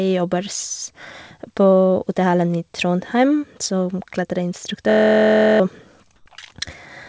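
From 4.90 s to 5.60 s the speech gives way to a system hang loop. The machine or its driver stalled while the sound hardware kept replaying one 23.22 ms slice of its ring buffer, which fits a 1024-sample buffer. That slice repeats 30 times, so about 0.7 s of real audio is lost under a steady buzz at 43.1 Hz. A dropout would leave silence, but this fills the gap with a pitched drone built from identical cycles.

Between 6.16 s and 6.26 s, for 100 ms, comfort noise stands in place of the background. The quiet background sits about 43 dB below the loudest speech, and there the real room sound turns into smooth, featureless hiss with a level shift of about 4 dB. This is likely discontinuous transmission with synthetic noise inserted at the receiver. A simple fade or a noise gate would only lower the real background, while this changes its character. Throughout the clip, the call codec leaves nothing above 8 kHz.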